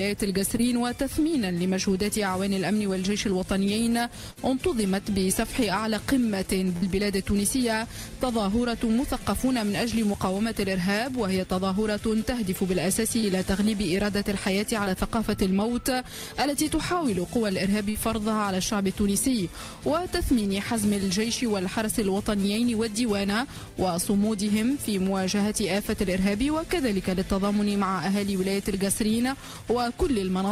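At 0.57 to 0.61 s a short concealed packet loss occurs. About 20 ms of audio never reached the decoder in time, and the receiver bridged the hole by extending the preceding sound before crossfading back. It comes across as a brief smear or wobble. On a spectrogram the harmonics run unnaturally steady for a moment. The waveform shows a slightly too-regular repeated cycle.

Bursts of packet loss follow at 4.31 to 4.39 s and 6.77 to 6.84 s. Here about 60 ms went missing in a row. The concealment stretched the last sound for roughly 50 to 60 ms and faded it, producing a held buzz or dying hiss. Playback then jumps ahead with that stretch of sound gone. Spectrally this appears as frozen, smoothly decaying bands. In the waveform the envelope sags before the real signal resumes.

Two more short concealed losses fall at 13.20 to 13.25 s and 14.85 to 14.88 s. These are the same momentary wobble, filling gaps of about 27 and 10 ms, with about 20 ms of audio lost each time.

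A final burst at 17.90 to 17.97 s repeats the held, fading patch, again with about 60 ms of sound lost.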